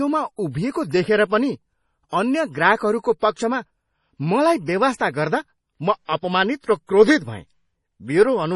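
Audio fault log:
throughout, MP3 compression: The encoder, likely starved of bits at something near 32 kbps, has removed everything above 11.4 kHz and zeroed weak frequency lines that flicker between frames, so the speech sounds dull, watery and swirly, with attacks heavily smeared.
4.96 to 5.00 s, pre-echo: A sharp attack landed late in a transform block, and quantisation noise sized for the loud onset spread back over about 41 ms of the quiet moment before it, so a brief hiss precedes the attack, which sounds soft and smeared.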